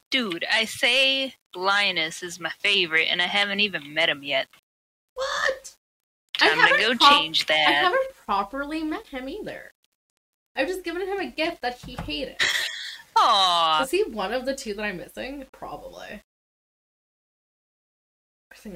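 Low bit depth without dither runs throughout: grainy distortion tracks the sound, about 40 dB down, likely from rounding to roughly nine bits without dither.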